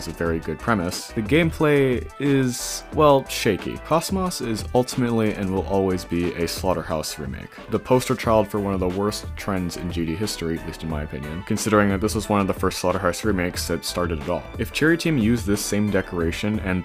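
No technical faults can be heard anywhere in this recording.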